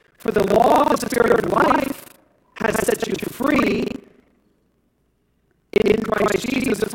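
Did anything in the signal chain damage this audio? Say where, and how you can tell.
Yes, at the driver or buffer stage. Buffer tearing runs through the whole clip as a rattling buzz at 25 Hz, heard only under speech. Writer and reader have slipped. Roughly two-fifths of each 40 ms period replays audio about 100 ms old, joined hard.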